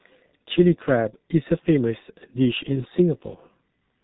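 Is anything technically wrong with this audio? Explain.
Yes. Throughout the speech, the audio carries heavy G.723.1 codec damage. This early internet-telephony coder packs speech into 30 ms frames at a very low rate, and the sound fits roughly 6.3 kbit/s. Nothing above 3.8 kHz survives, so the voice is muffled and dull. Because the vocal-tract model is refreshed only once per frame, fast articulation gets smeared: consonants blur together, and the voicing takes on a rough, hoarse, buzzy quality.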